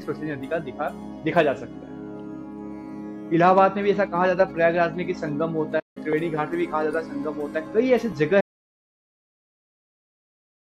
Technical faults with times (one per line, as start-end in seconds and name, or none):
5.79-5.97 playback stall
8.41-10.70 audio dropout to silence